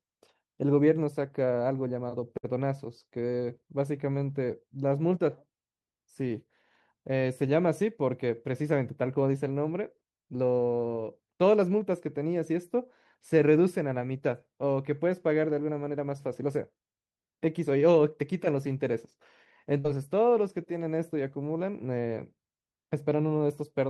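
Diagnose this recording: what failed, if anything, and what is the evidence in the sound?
The network path dropped a short run of packets twice, a burst of packet loss at 2.37 to 2.45 s and again at 19.79 to 19.86 s. Each time the receiver had nothing to play, so it stretched the last received sound for about 57 ms and then 51 ms, fading it as the gap went on. The speech then picks up further along, with roughly 60 ms of the original audio simply gone at each point.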